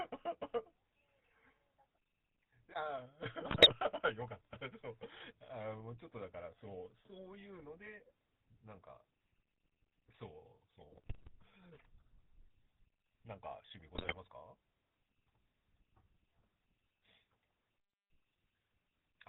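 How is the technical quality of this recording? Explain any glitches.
The technical quality is poor: the speech runs through a low-rate mobile codec for the whole clip, and three short bursts of transmission errors break it up further.

The GSM full-rate codec, consistent with the original 13 kbps mobile standard, rebuilds the voice from a vocal-tract model excited by sparse, regularly spaced pulses, discarding everything above 4 kHz. The result is a dull, band-limited voice with a plainly audible buzzy, gravelly roughness throughout.

GSM bit errors strike from 3.40 to 3.73 s, 10.92 to 11.29 s and 13.94 to 14.18 s. Corrupted bits reaching the decoder scramble its filter, pitch and gain parameters frame by frame, warping the spectrum and level, so the voice dissolves into squawks, pops and gargling.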